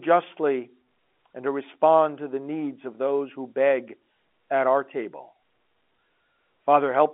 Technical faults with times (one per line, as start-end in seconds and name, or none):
none